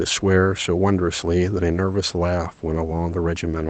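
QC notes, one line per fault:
No faults found in this speech clip; it passes through an Opus call path at about 20 kbps with audio band-limited to 8 kHz, and the room noise sits about 36 dB below the speech.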